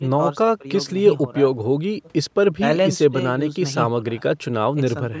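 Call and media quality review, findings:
No faults found in this speech clip; it just carries the usual call-microphone processing, with the lowest bass trimmed by the high-pass and nothing above about 8 kHz, which is what you'd expect from that path.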